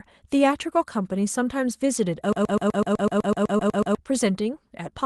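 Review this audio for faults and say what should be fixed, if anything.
From 2.33 to 3.95 s the same 125 ms fragment repeats exactly, back to back, thirteen times, like a stuck broken-record loop, and the speech that belonged there is gone. The likely cause is a stalled player or stream resending its last buffered piece. Prevent it by having the player detect a stalled stream and output silence or re-buffer instead of replaying its last buffered fragment.

At 3.57 to 3.61 s, inside that repeating stretch, there is a brief smeared wobble where the decoder bridged a gap. This is short concealed packet loss: about 20 ms of call audio arrived too late, and roughly 14 ms was synthesised by extending the preceding sound before blending back. Prevent it with a network path that loses fewer packets, a larger jitter buffer, or forward error correction on the call codec.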